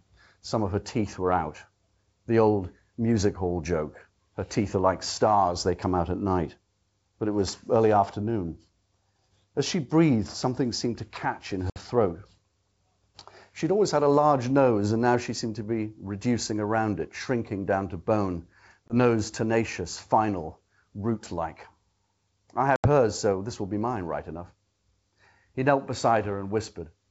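Packet loss on an ADPCM call drops about 60 ms at 11.70–11.77 s after "catch in", 20 ms at 18.88–18.93 s after "shrinking down to bone", and 80 ms at 22.76–22.88 s before "so this will be". Each gap is filled with silence, knocking the decoder's predictor and step size out of step, so each hard-edged hole ends in slight distortion that settles within tens of milliseconds. The G.722 wideband coding around these gaps, consistent with 64 kbit/s, stays clear.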